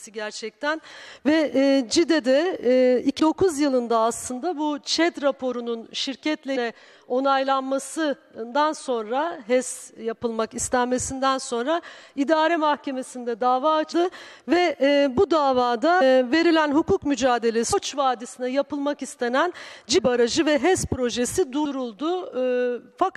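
The audio has compressed frames skipped at 3.18, 6.55, 13.91, 16.0, 17.72, 19.97 and 21.64 s. Each time it jumps ahead, dropping from about 0.1 to 0.7 s, the longest at 17.72 s. Missing or rejected frames cause this. The frames are about 23 ms long.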